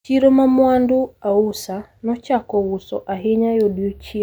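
Speech, with the two channels drifting apart throughout: separate clocks roughly 20 ppm apart let the inter-channel delay creep to well under a tenth of a millisecond. Summed to mono, this gives slow flanging, seen on a spectrogram as comb notches gradually sliding.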